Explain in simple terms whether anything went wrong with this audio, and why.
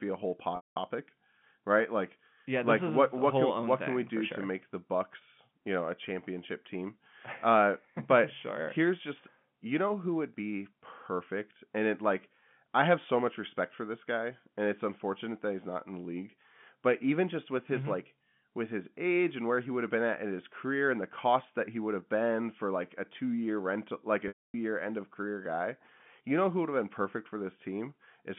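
Two short dropouts of packet loss with pitch repetition, at 0.56 to 0.76 s and 24.28 to 24.54 s: the receiver repeats a brief buzzy tone, then fades to silence until the speech resumes. The telephone-band sound of the G.711 telephone coding is normal.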